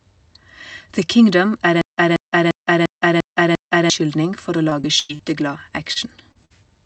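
From 1.81 to 3.90 s the speech breaks into a stutter with silent gaps. A 184 ms fragment plays, then 163 ms of dead silence, repeating every 347 ms, six times. The likely cause is a stalled stream replaying its last chunk. The speech meant for that stretch is lost.

Between 4.69 and 5.21 s there is repeated packet loss, giving a robotic sound. Four gaps fall close together, the longest 97 ms. About a third of this span is patched audio, so the speech turns choppy, with pieces missing.

At 5.93 to 5.98 s comes a short concealed packet loss. A 20 ms hole is filled by extending the previous sound, heard as a brief smear. Another follows at 6.32 to 6.37 s, covering 40 ms missing. It leaves a small wobble where a consonant can drop.

At 6.45 to 6.52 s a burst of packet loss removes 40 ms in a row. The decoder holds the last sound and fades it, giving a short held buzz or hiss. Then speech resumes slightly further on.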